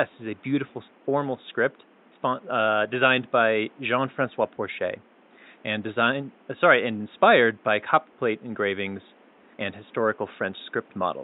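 Nothing stood out on listening to the speech, and the only other sound is a low background room noise sitting about 32 dB below it.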